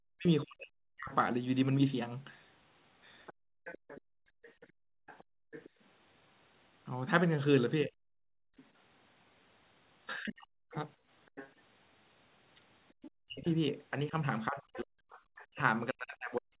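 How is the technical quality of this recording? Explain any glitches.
The recording has clear echo-cancellation trouble in a call-quality channel, with the audio band ending at 4 kHz as the G.711 A-law call path leaves it.

Speech suppressed in double talk, 0.0 to 1.13 s and from 7.85 s to the end: with both parties likely talking at once, the echo canceller could not tell near speech from loudspeaker echo and pulled everything down. The speech dips by as much as about 40 dB, for roughly a second at the start, and is suppressed again later.

Other side's voice leaking through, 3.26 to 15.46 s: the echo canceller likely failed to strip the far party's loudspeaker playback from the microphone. A second voice sits underneath, roughly 20 dB below the main speech.

Background gated by the echo canceller, 3.33 to 11.09 s: while the loudspeaker played, the canceller clamped the microphone hard. 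The room sound drops by up to about 31 dB, adding up to around two seconds, then returns when the canceller releases.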